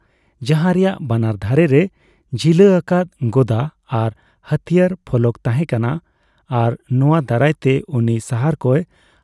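No technical faults can be heard anywhere in this speech recording. The sound stays continuous and consistent throughout, with no event that needs a time marked.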